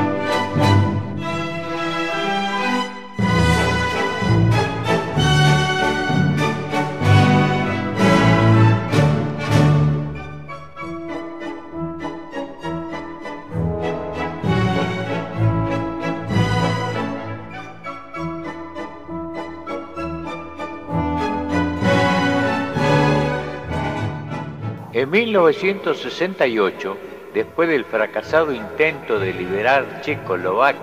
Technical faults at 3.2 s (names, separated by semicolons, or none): none